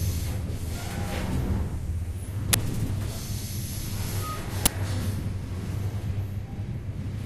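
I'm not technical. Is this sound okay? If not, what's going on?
No. Throughout, the sound is dull and muffled, with a gurgling, grainy roughness and a top end that seems to flicker in and out. That is likely MP2 compression squeezed too hard, so upper frequency bands get switched off and what remains is stored crudely.

At 2.53 s and again at 4.66 s there is a very brief, loud burst of harsh digital noise. This is an uninitialised buffer: a short chunk of audio, about 12 ms long, was played before any real sound had been written into it, so leftover memory came out as noise.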